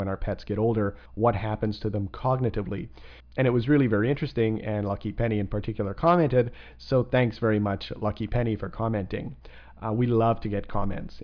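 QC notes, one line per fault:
No faults found. Nothing in the audio calls for a note.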